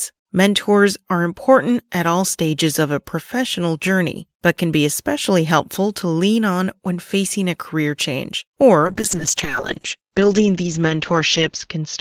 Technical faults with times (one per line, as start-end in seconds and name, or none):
8.82-12.01 call bitrate drop